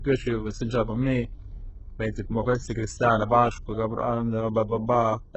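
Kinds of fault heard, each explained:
HE-AAC compression: The speech sounds heavily processed from start to finish. S sounds come out gritty and lispy, a metallic sheen sits over the upper range, and nothing at all reaches above 8 kHz. This is likely HE-AAC coding at a very low rate, one that fits an 8 kbps stream. Only the lower spectrum is truly coded. The treble is rebuilt by copying lower bands upward under a coarse envelope, so its harmonics never match the originals.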